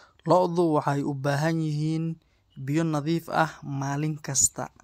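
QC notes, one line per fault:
Nothing to log here; I didn't hear any technical faults anywhere in this speech recording.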